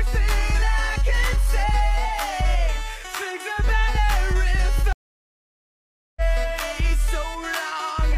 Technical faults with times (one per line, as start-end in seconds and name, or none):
4.93-6.21 stream reconnect